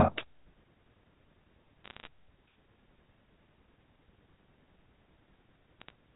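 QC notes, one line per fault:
1.84–2.08 s, bit errors on a digital phone line: a short burst of sharp ticks and crackle over the speech. At roughly half a percent error rate, flipped sign and high-order bits on the A-law line throw single samples far off, and each one clicks.
5.80–5.90 s, bit errors on a digital phone line: a briefer, sparser spatter of ticks. The error rate is lower here, around a fifth of a percent, so fewer corrupted samples land in the tenth of a second.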